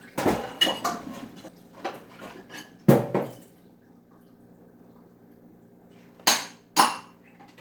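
At about 1.48 s there is a skip ahead. Roughly a fifth of a second of audio is dropped and the sound on either side is joined almost directly, with no silence filling the jump. That missing gap separates it from a dropout, which would leave an audible hole.

From 1.57 s to 2.79 s a jitter buffer speed-up follows. The receiver trims short pitch-period pieces again and again, removing about a tenth of a second overall. The sound plays at 108% speed and feels hurried. Because pitch stays unchanged, it is distinguishable from resampling, which would raise the pitch.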